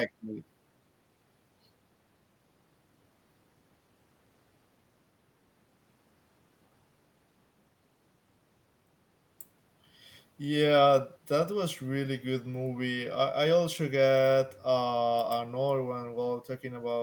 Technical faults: none

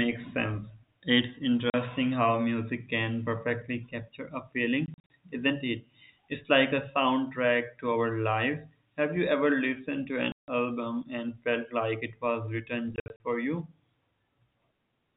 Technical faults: packet loss filled with silence

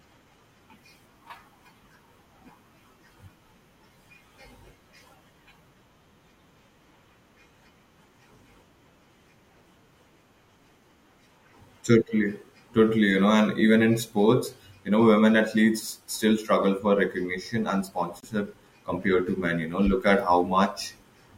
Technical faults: broken MP3 bit reservoir

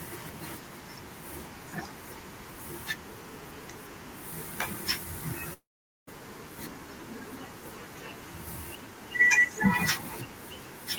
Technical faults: long network dropout

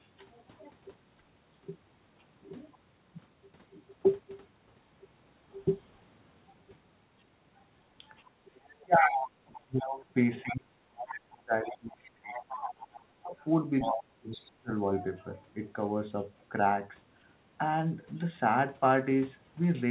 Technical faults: speech suppressed in double talk; other side's voice leaking through

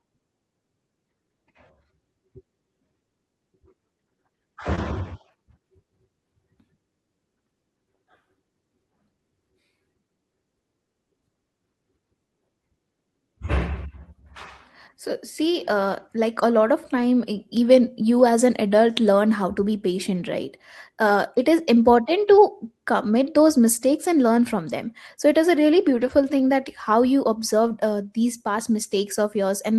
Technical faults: short concealed packet loss; lost packet rebuilt from error correction

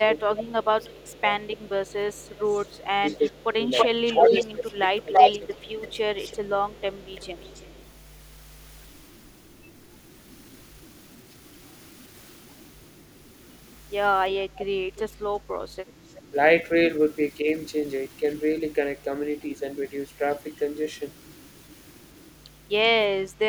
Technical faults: speech suppressed in double talk; echo leak

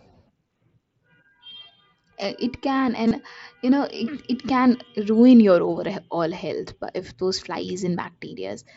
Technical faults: concealed Bluetooth headset packet loss

